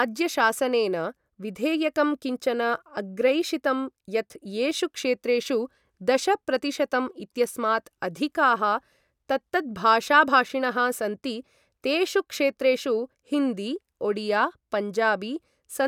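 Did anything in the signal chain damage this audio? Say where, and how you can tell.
No, nothing in the signal chain has damaged this speech recording, and every stage from capture to playback leaves the signal intact.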